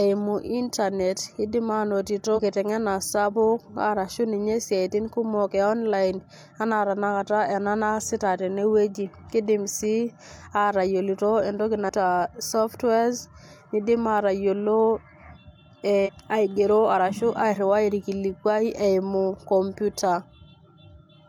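Damaged data in the compressed stream of this speech recording breaks the decoder's reading of a few frames, so it loses sync and has to hunt for the next valid frame header. The result is three short disturbances, each heard as a chirp, squawk, click or short hole: at 2.33 to 2.39 s, at 11.85 to 11.89 s just after "sii atayolito entoki", and at 16.03 to 16.09 s just before "aigero arashu". Each lasts about 50 to 70 ms.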